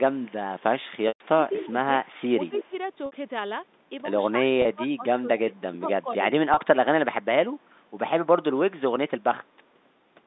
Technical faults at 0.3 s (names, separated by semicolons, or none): echo leak